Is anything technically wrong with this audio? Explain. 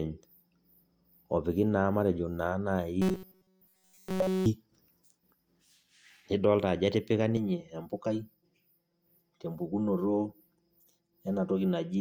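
Yes, two faults.

From 3.02 to 4.46 s there is robotic sound from repeated short buffers. New audio most likely stopped arriving in time, so the playback side kept looping a tiny slice of the last buffer instead of moving forward. Across that stretch nearly everything heard is repetition. The loop imposes a fixed 188 Hz buzz, which fits a slice about 5.3 ms long. The speech becomes a rigid, metallic drone that only roughly tracks the words.

From 7.37 s to the end at 12.00 s there is channel delay causing comb filtering. One channel runs roughly 5 ms behind the other, and when the two are combined to mono, content shared by both cancels at regularly spaced frequencies. The first notch falls somewhere near 100 Hz, with further notches repeating upward at even intervals. The speech turns hollow and phasey, with a fixed coloration for the rest of the clip.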